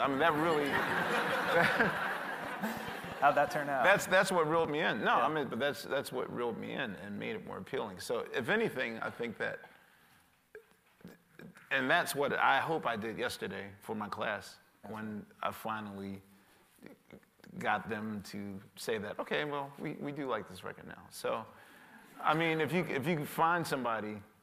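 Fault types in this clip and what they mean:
Train of clicks: from 0.05 to 4.66 s, around twenty similar pulses arrive at about 4.1 per second at uneven intervals, peaking roughly 5 dB above the sound. Likely interference or a faulty connection. They show as thin vertical broadband lines on a spectrogram and sharp spikes on the waveform.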